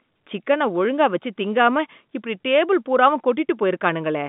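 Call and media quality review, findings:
No call or media quality findings; the G.711 telephone coding path is working normally, with nothing heard above 3.8 kHz.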